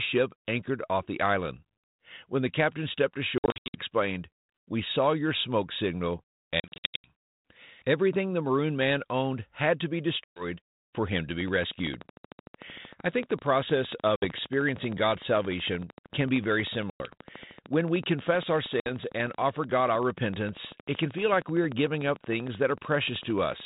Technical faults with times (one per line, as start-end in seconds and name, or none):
3.38-3.79 packet loss on an ADPCM call
6.60-7.12 packet loss on an ADPCM call
10.24-10.44 packet loss on an ADPCM call
11.41-23.61 train of clicks
14.16-14.26 packet loss on an ADPCM call
16.90-17.12 packet loss on an ADPCM call
18.80-18.91 packet loss on an ADPCM call